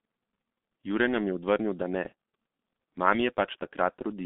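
From start to finish the speech carries heavy G.723.1 codec damage. Nothing gets through above about 3.6 kHz or below 200 Hz, and the slow frame-by-frame voice modelling, which fits a 6.3 kbit/s rate, leaves it muffled and hoarse with smeared consonants.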